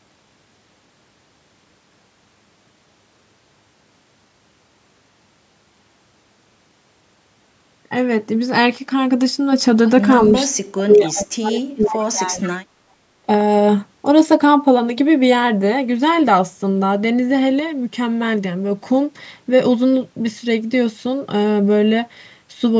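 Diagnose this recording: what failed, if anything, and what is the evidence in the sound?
From 10.53 to 12.68 s the speech dips, thins and breaks into pieces, falling very deeply at its lowest, for about two seconds in all. This is likely speech suppressed in double talk: the call's echo canceller, facing both sides at once, turned the talker down along with the echo.

Faint copies of the voice appear at 11.08 to 11.12 s, 11.83 to 12.03 s and 12.41 to 12.49 s, trailing the original by 458 ms and sitting well below it. This is likely echo leak: a loudspeaker-side canceller let part of its microphone pickup return.

The room sound drops by about 20 dB from 12.96 to 13.24 s, roughly a third of a second, then recovers. This is background gated by the echo canceller in the call processing, which clamped the microphone while the loudspeaker played and released it afterwards.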